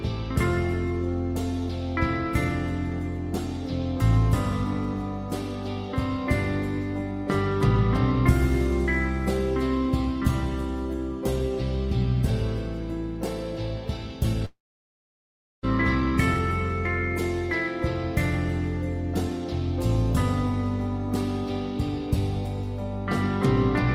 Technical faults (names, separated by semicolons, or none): long network dropout